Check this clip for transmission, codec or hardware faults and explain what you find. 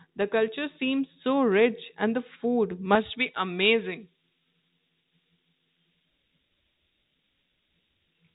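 Two faults can be heard: a faint high whistle running under the whole clip, and an abrupt shift to a thin, bright, hissy tone that starts partway through and lasts to the end.

Switching supply whistle: Throughout, a thin whistle sits around 5 kHz, about 35 dB below the speech, its pitch wandering between roughly 5.2 and 5.5 kHz. A switching power supply is running in an audible burst mode or beating with another one, and its frequency drifts as the load changes.

Pre-emphasis left on: From 2.95 s to the end, the speech turns sharp, brittle and sibilant. A J.17 treble boost, about 11 dB at 10 kHz relative to 1 kHz, was applied before transmission, but the matching de-emphasis was never applied on playback.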